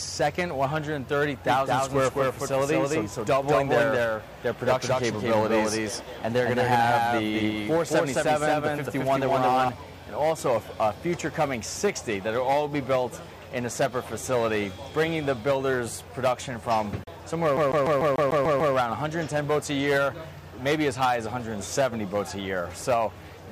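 From 1.47 s to 9.69 s the audio carries a doubled audio track: a second full-band copy of the same material runs about 200 ms behind the original, at roughly the same level. The lag stays fixed, and the copy has no decay or room colouring, so it sounds like a hard slapback rather than an echo. It cuts in and out abruptly at those two times. The likely cause is a second, slower capture path or an edit holding two copies out of alignment.

At 17.04 to 17.08 s there is a digital broadcast dropout. The sound fades to silence over about 3 ms and returns a moment later, leaving a gap of roughly 32 ms. That matches a single corrupted or missing frame being muted by the receiver until valid data resumed. Whatever was transmitted during that gap is lost, not delayed, so the audio resumes further along without repeating anything.

From 17.57 s to 18.75 s the playback behaves like a CD stuck on one turn. 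A segment of about 147 ms plays eight times in a row, with a brief mute at each jump back. This produces the rapid, evenly spaced stutter of a skipping disc. The pickup is being thrown back to the same point on each rotation, as a scratch would cause, before it breaks free.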